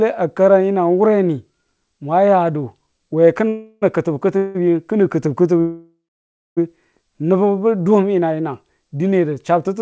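Three call audio freezes interrupt this speech: at 3.48–3.84 s and 4.38–4.57 s the last sound hangs on as a fading buzz for about 340 and 170 ms, and at 5.61–6.59 s it fades into roughly 600 ms of silence within a 960 ms stall. Each time the speech resumes where it stopped, with nothing lost, only delayed. The likely cause is packets held up in transit, draining the jitter buffer behind the G.722 coding, which stops at 8 kHz.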